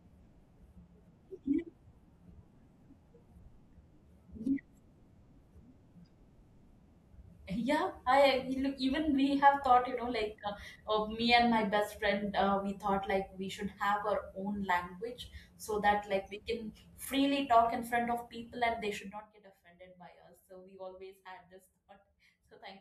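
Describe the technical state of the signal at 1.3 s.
At 1.3 s the speech signal is intact, with no technical fault at that moment and only the ordinary smooth level changes of a fader-style adjustment.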